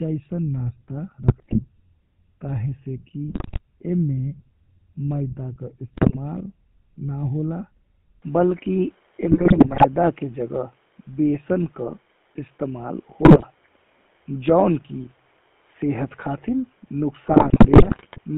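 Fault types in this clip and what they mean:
GSM full-rate codec: The whole clip carries the buzzy, gravelly roughness of this early vocal-tract codec. Its excitation is a coarse pulse train, and that grain is plainly audible here. Nothing passes above 4 kHz. The sound fits a 13 kbps stream.
GSM bit errors: Corrupted bits reach the decoder in six bursts, at 1.22 to 1.61, 3.28 to 3.59, 5.93 to 6.17, 9.30 to 9.86, 13.22 to 13.45 and 17.28 to 18.19 s. Damaged filter, pitch and gain values cause squawks, pops and gargling.
Input switched to a poorer device: From 8.22 s the sound abruptly turns duller and boxier. There is no gap at the change. Nothing above 3.8 kHz survives, the level shifts by about 5 dB, and a faint new noise floor appears. A likely cause is a change of input device.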